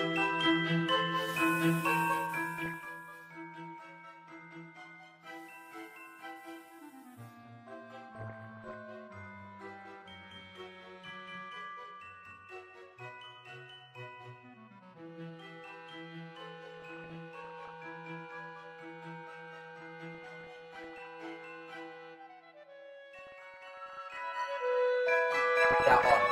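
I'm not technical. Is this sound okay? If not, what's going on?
No. Bursts of burbling noise break through at 2.58 to 2.89, 8.15 to 8.74, 16.74 to 17.74, 20.15 to 21.15, 23.19 to 24.18 and 25.62 to 26.11 seconds. This is DAB burbling: weak digital radio reception lets errors slip past correction, so slices of the sound briefly jump in level.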